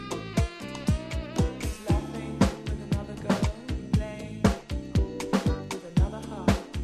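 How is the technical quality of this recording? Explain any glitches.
No glitches are audible anywhere in the recording, so there is nothing to explain.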